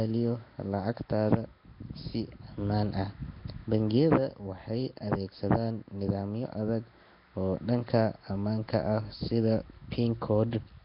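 Throughout the clip, the speech was likely squeezed through Flash's Nellymoser Asao codec, at a rate that points to roughly 22 kbps. Weak bands starved of bits are refilled with noise, leaving heavy Nellymoser compression damage: a rough, hissy halo, smeared underwater tone, and nothing above 5.3 kHz.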